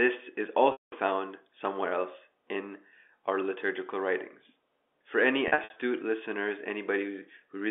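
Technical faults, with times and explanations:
0.72 to 0.92 s: packet loss with pitch repetition. About 200 ms is lost, which fits ten 20 ms packets. The last pitch period repeats, then fades to silence, unlike the abrupt gap of a plain dropout.
5.48 to 5.76 s: packet loss with pitch repetition. Here 160 ms is lost in scattered runs of up to 60 ms across 280 ms. This gives brief held, buzzy stutters rather than one long fade.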